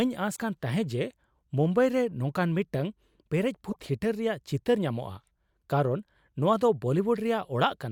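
Damaged data in a compressed stream hits this speech clip at 0.33 to 0.37 s and 3.69 to 3.76 s. The decoder misreads corrupted frames and loses sync, producing brief glitches before resynchronising.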